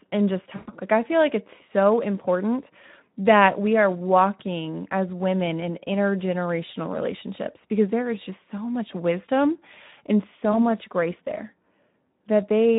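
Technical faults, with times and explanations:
Throughout, Speex codec: the speech carries plainly audible coding damage, a hoarse, noisy grain from a low-rate CELP coder starved of excitation bits. It sounds like roughly an 11 kbps setting, and anything above 8 kHz is just a shaped noisy fill.
0.55 to 0.70 s, VoIP packet loss concealed by the speech codec: right after "and just", about 120 ms goes missing and the decoder keeps extrapolating its last pitch and filter, so the sound smears into a buzzy tone or coloured noise that fades, staying weak briefly afterwards.
10.52 to 10.58 s, VoIP packet loss concealed by the speech codec: a shorter gap of about 20 ms between "so much wisdom and" and "much grace there", patched the same way, giving a brief smear and a weak or distorted onset as the decoder recovers.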